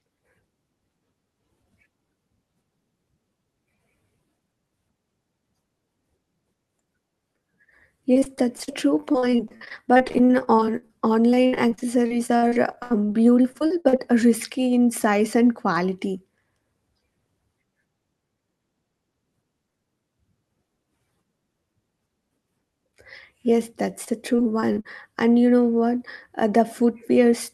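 Around 8.13 to 10.91 s, then again from 11.31 to 14.00 s, the speech breaks up with repeated packet loss, and it goes choppy. Each missing chunk, up to about 78 ms, gets papered over by stretching the last bit of sound, so roughly a quarter of those stretches is filler. A shorter burst at 24.04 to 24.86 s sounds the same.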